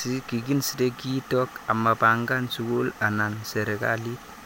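No technical faults are audible.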